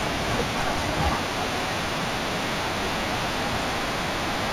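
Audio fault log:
Throughout: imaging from linear upsampling. The speech points to a rise from 16 kHz to 48 kHz using straight-line interpolation, a weak filter. The top is dulled, and a mirrored image around 20 dB down fills 8 to 16 kHz, lending sibilants a metallic shimmer.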